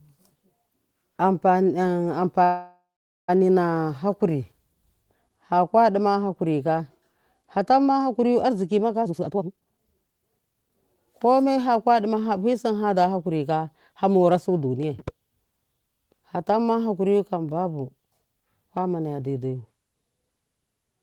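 At 2.43 s the speech stops and a call audio freeze begins. The last sound carries on as a fading buzz or hiss, then goes silent for about half a second. Speech resumes at 3.30 s exactly where it stopped. This points to delayed packets likely draining the jitter buffer. The 850 ms gap adds delay but loses nothing.

From 9.02 to 10.77 s there is a jitter buffer speed-up. The receiver trims short pitch-period pieces over and over to shed the built-up delay. Roughly a second is removed. Speech plays at about 148% speed with unchanged pitch, so it sounds hurried.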